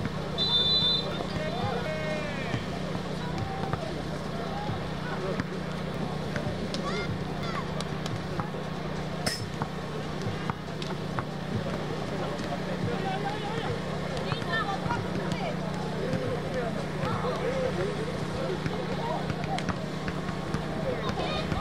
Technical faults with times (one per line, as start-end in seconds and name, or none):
1.11-1.86 chunks out of order
5.94-7.43 chunks out of order